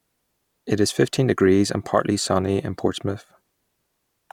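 No audible technical faults here.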